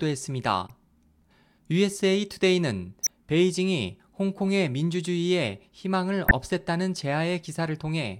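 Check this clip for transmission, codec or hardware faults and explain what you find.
Corrupt frames were decoded three times in this speech, at 0.66–0.70 s, 3.03–3.10 s and 6.25–6.31 s. Damaged bits in a few compressed frames were played anyway. Energy lands at wrong frequencies. Each is a brief glitch. The first is faint, the last two loud.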